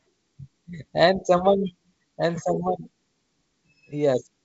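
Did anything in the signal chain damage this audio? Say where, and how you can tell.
No, nothing in the signal chain damaged this audio; the G.722 wideband coding it passed through, with its top end stopping near 7.7 kHz, is working as it should.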